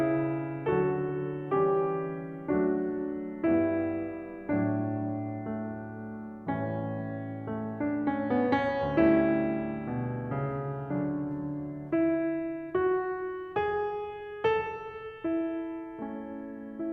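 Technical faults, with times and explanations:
No technical faults detected in this music clip.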